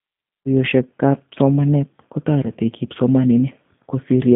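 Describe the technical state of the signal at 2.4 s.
Around 2.43 to 2.50 s, VoIP packet loss concealed by the speech codec fills a gap that fits a single lost 10 ms frame by extrapolating pitch and filter, leaving a brief weakened stretch that recovers slowly. Underneath, the G.729 codec, at 8 kbit/s, rebuilds the speech from a filter and sparse pulses within a 150 Hz to 3.6 kHz band, giving a plainly rough, synthetic tone.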